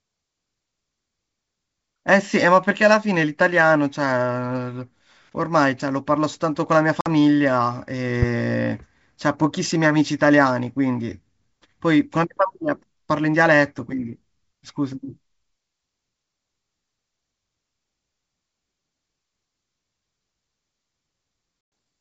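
A speech recording carried over a wideband G.722 link (the clear band up to 7 kHz fits its 64 kbit/s mode) shows packet loss on an ADPCM call twice: at 7.01 to 7.08 s, a 50 ms gap fitting a handful of lost packets, and at 21.61 to 21.72 s, a 110 ms gap fitting around ten. Each dropout is a hard-edged silent hole, a flat line in the waveform and a blank vertical strip across all frequencies on a spectrogram. Because the decoder's adaptive predictor and step size have drifted from the sender's, the speech resumes slightly distorted until it settles within some tens of milliseconds.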